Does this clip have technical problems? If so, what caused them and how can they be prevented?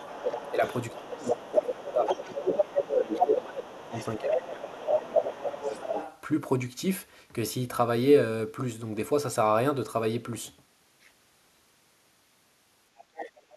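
Yes. Other side's voice leaking through runs from 0.00 to 4.78 s only a few decibels under the talker, then returns briefly at 5.14 to 5.22 s at roughly equal level, and faintly at 5.98 to 6.21 s and 12.97 to 13.56 s. The cause is likely the far end playing from a loudspeaker into the microphone, with the echo canceller leaving residue. A second, independent voice marks it as echo, unlike the talker's own voice thinning under suppression. Headphones or less acoustic coupling would prevent it.

Speech suppressed in double talk hits the talker from 0.51 to 4.40 s, with dips of around 15 dB over about three seconds, and again from 4.75 to 5.99 s, dropping deeper, near 20 dB, for about a second and a half. Both spans overlap the leaking far-end voice, so the echo canceller likely took both voices for echo and pulled the level down. What sets it apart is that the talker fades or gaps only while the other side is talking, rather than at random like packet loss. 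A canceller tuned for full-duplex double-talk, or headphones that remove the echo, would prevent it.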